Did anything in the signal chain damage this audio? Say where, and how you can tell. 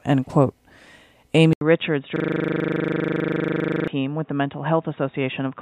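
Yes. At 1.53 s the sound drops out for 80 ms and then returns duller and boxier. From there to the end, nothing is left above 3.8 kHz, the level sits about 5 dB lower, and a new background noise runs roughly 40 dB under the signal. This is likely an input switched to a poorer device at the driver or device-selection stage. A codec or call-processing low-pass would narrow the band, but it wouldn't bring a silent gap together with a simultaneous change in level and noise floor.

From 2.16 s to 3.88 s one 40 ms piece of audio repeats exactly, 43 times, producing a steady 25 Hz buzz. That is a system hang loop at the driver or buffer stage: the host stalled while the hardware kept replaying the same ring buffer, and the loop length fits a buffer of about 40 ms. Network packet-loss concealment also repeats material, but it fades and varies, whereas these repeats are identical and locked to a fixed rate.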